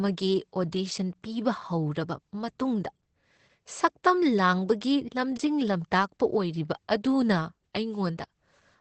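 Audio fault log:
throughout, Opus voice compression: the speech runs through Opus at 12 kbps in its SILK voice mode, wideband, in 20 ms frames. Nothing sounds above about 8.6 kHz, so sibilants lack their top end, and the coarsely coded excitation leaves the voice hoarse and slightly robotic. Unlike a plain low-pass filter, which only dulls the sound, the damage here also roughens the texture of the voice itself, and it is plainly audible across the whole clip.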